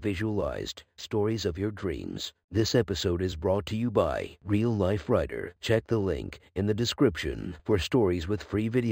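Speech, affected throughout by imaging from linear upsampling. The sound points to a roughly 11 kHz original raised to 44.1 kHz by straight-line interpolation between samples, a weak filter that dulls the top of the original band and lets mirror copies of the spectrum through, heard as a metallic shimmer on sibilants. On a spectrogram, the speech energy is dulled toward 5.5 kHz, and above it a mirrored copy spans 5.5 to 11 kHz, about 25 dB below the signal.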